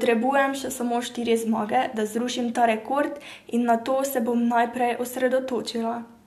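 No technical faults can be heard anywhere in the speech.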